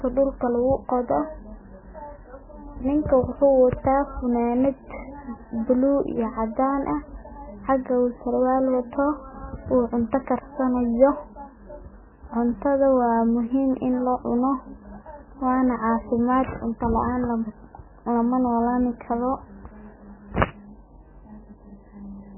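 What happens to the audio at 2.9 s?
At 2.9 s the speech is muffled and watery, as it is across the whole clip: nothing survives above 3 kHz, and weak detail flickers in and out. That points to heavy MP3 compression at a very low bitrate, likely around 9 kbps. Unlike a plain low-pass filter, it adds swirling, chirpy artefacts.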